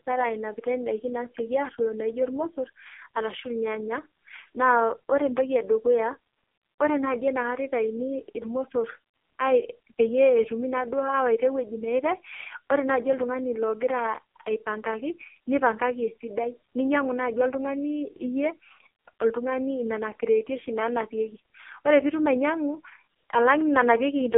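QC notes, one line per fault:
Throughout: AMR narrowband mobile codec. The whole clip sounds like a mobile call squeezed into a telephone band of 300 Hz to 3.4 kHz, with nothing above 3.4 kHz and the low end thinned. The codec rebuilds speech from a vocal-tract filter excited by sparse pulses, and the damage here is heavy: buzzy, synthetic-sounding speech that fits the codec's lowest mode, around 4.75 kbps, where very few bits go to each 20 ms frame.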